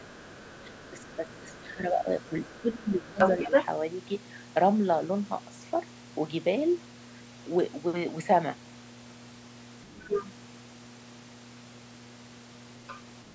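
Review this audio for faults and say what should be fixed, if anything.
A steady low 60 Hz tone, with low harmonics, sits under the whole clip at roughly 20 dB below the speech. This is mains hum, from a ground loop or a transformer near the cabling feeding power-line current into the signal path. Prevent it by breaking the ground loop with a single grounding point or an isolation transformer.

From the start to 3.19 s, the talker's speech dips and drops out in pieces, about 15 dB at its deepest and roughly a second and a half in total. This is speech suppressed in double talk. Both sides were likely talking at once, and the echo canceller, unable to tell near speech from loudspeaker echo, turned both down. Prevent it with a better double-talk detector or a headset instead of an open speaker.

A second voice comes through at 0.12 to 1.59 s (very faint), 2.2 to 3.65 s (louder than the talker), 9.98 to 10.28 s (about equal) and 12.87 to 12.99 s (faint). 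This is the other side's voice leaking through. The loudspeaker's output likely reached the microphone and escaped echo cancellation. Prevent it with headphones or stronger echo cancellation and residual-echo suppression.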